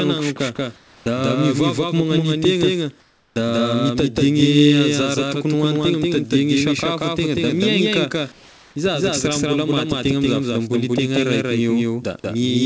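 Throughout the speech a doubled audio track runs alongside the original: a second, equally loud, full-band copy trails by around a fifth of a second. It is likely a second capture or misaligned edit. Unlike room echo, it has no decay or reverberant colouring.

From 0.76 to 1.06 s, comfort noise takes the place of the background. The real ambience gives way to a smooth, featureless hiss about 12 dB quieter. At 0.99 s the onset is clipped by the voice detector, so the speech resumes abruptly with roughly 70 ms of its attack missing. This is likely discontinuous transmission on the sending side. Unlike a gate or dropout, the gap is filled with synthetic noise rather than silence.

The same pattern returns from 3.00 to 3.36 s. Here the substituted noise sits about 17 dB below the background it replaces. From 3.28 s, about 80 ms of the next onset is cut, so the sound starts hard, without its soft beginning.

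From 8.32 to 8.76 s comfort noise appears again, this time only about 2 dB quieter. The change is heard as the loss of the background's texture rather than a drop in level. The call codec path passes nothing above 8 kHz, which fits a wideband codec such as G.722.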